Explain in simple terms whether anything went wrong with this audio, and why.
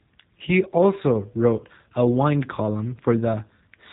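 G.729 codec damage runs through the whole recording. This phone-call codec rebuilds speech from a rough model of the mouth and a few pulses, and it cuts everything above 3.8 kHz, so the voice sounds muffled, slightly rough and synthetic.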